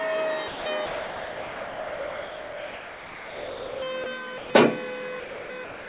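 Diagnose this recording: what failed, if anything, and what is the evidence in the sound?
The fault sits in call processing: sound dropped by the voice detector, with steady comfort noise in its place. The audio gives way to flat, featureless noise at 0.48–0.66 s, 0.86–3.82 s, 4.04–4.06 s, 4.38–4.5 s, 5.2–5.5 s and 5.64 s to the end. The sender's detector likely judged the sound to be background and stopped transmitting. Unlike packet-loss concealment, nothing is repeated or smeared, and unlike a hard mute, the gaps carry noise. The band-limited G.711 sound, with nothing above 4 kHz, is the call path itself.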